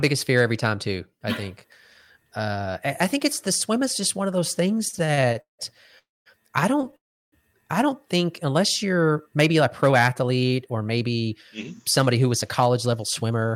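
After "just one of those", repeated stalls (stutter) run from 4.75 to 5.61 s. Thirteen short gaps are filled with continued sound, the longest 176 ms. Nothing is lost, but the speech drags.

Two call audio freezes follow, at 5.99 to 6.28 s and 6.96 to 7.34 s. Both fall mostly silent. Delayed packets are the likely cause. Speech resumes with "I don't think unless".

After "don't think unless you're", a jitter buffer speed-up runs from 9.32 to 13.45 s. Small pieces are trimmed out, about a third of a second in all. Speech runs 8% fast at unchanged pitch.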